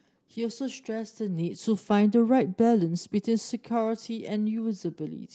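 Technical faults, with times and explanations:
No faults present; the speech carries the ordinary character of a call codec path, with the top end stopping around 8 kHz, consistent with Opus at roughly 20 kbps.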